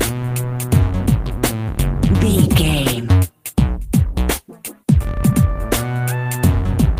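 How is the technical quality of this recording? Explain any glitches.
Nothing stood out on listening, so there are no glitches in this recording to explain.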